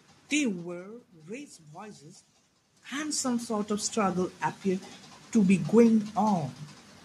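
From 2.88 to 5.66 s the automatic gain control reacts to a level drop of about 16 dB, after the talker shifts away from the microphone at roughly 2.5 s, by slowly raising its gain by about 4 dB. This automatic gain rising treats the whole signal alike, so the speech and the room noise behind it swell upward together over nearly three seconds. The background noise of the room grows along with the voice.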